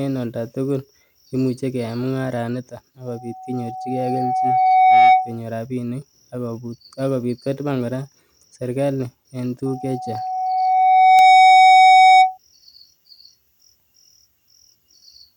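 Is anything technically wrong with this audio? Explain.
Yes. Loudspeaker feedback squeal sounds twice, from 3.07 to 5.41 s and from 9.65 to 12.38 s. A microphone re-amplifies its own loudspeaker, and the loop runs away at 750 Hz. That single tone swells over a second or two, ending around 15 dB above the speech.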